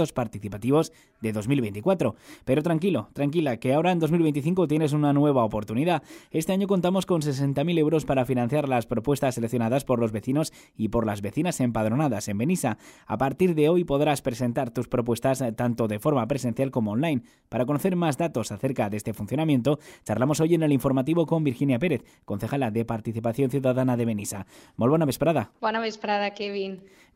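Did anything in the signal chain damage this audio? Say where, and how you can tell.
No, nothing in the signal chain has audibly damaged this audio, and no stage from capture through to playback has left a mark on the signal.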